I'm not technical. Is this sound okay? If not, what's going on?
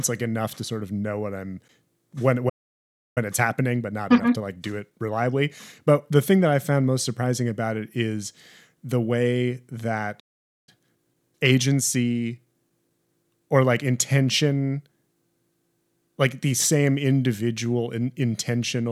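No. The speech cuts out twice. This is a playback stall. It goes silent from 2.49 to 3.18 s, about 0.67 s, and from 10.19 to 10.69 s, about 0.48 s. The player likely ran short of incoming data and had nothing to play.

After each gap comes a time-compressed catch-up. From 3.18 to 6.18 s and from 10.69 to 13.69 s the speech runs about 1.1 times too fast. The pitch stays normal, but it sounds hurried.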